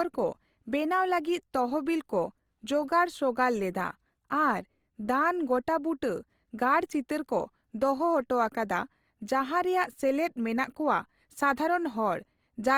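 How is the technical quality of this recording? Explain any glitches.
The recording is marred throughout by plainly audible coding damage, most likely Opus compression in its music (CELT) mode, with roughness that fits a low bitrate around 24 kbps. The encoder kept every frequency band's energy but, short of bits, filled fine detail with folded or noise-like content, so the speech sounds grainy and rough. Unlike MP3 damage, there are fewer swirling, hollow gaps, and the bandwidth stays full, reaching about 20.2 kHz.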